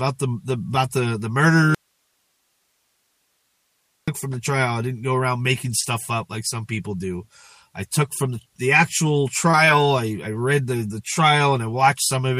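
An audio dropout to a faint residue cuts the sound abruptly from 1.75 to 4.08 s. Only hiss remains. The likely cause is signal loss on a still-live path.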